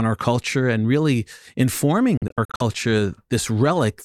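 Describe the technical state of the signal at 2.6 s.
At 2.6 s the speech is inside a broken stretch from 2.17 to 2.62 s: short holes, the longest about 43 ms, drop out repeatedly, each resuming as though the sound had played on, likely a Bluetooth dropout from late packets. The waveform shows flat gaps with abrupt or briefly faded edges; the spectrogram shows blank vertical stripes.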